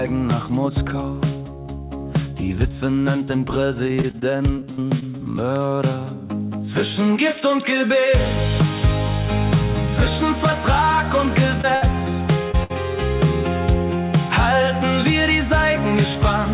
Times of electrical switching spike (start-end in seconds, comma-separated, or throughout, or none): 5.56